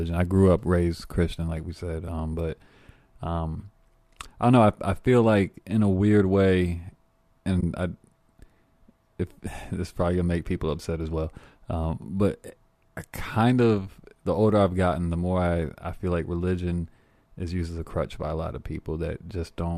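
At 7.61 to 7.63 s the speech briefly drops into a short, soft-edged gap, fading out and back in over roughly 20 ms. This is AAC frame loss with muting. The gap's length fits two lost frames of a low-delay codec, and the decoder filled them with silence. Its overlapping windows turned the cut into a quick fade rather than a hard edge. The light coding texture throughout is likely from low-delay AAC compression.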